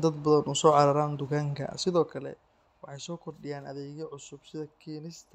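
From 1.8 to 2.4 s, zipper noise: the level falls about 10 dB in 1 dB steps, some thirty a second, ticking audibly, unlike a smooth fade.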